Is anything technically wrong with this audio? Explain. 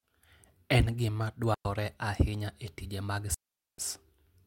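Yes, there are two digital wireless dropouts in this speech clip. The first hits at 1.54 s and lasts about 110 ms; the second runs from 3.34 to 3.78 s, roughly 440 ms. In both, the wireless link lost too much data, so the receiver simply muted with a very quick fade instead of passing garbage. You hear clean holes of near silence, no crackle or noise burst either side, just the signal vanishing and returning.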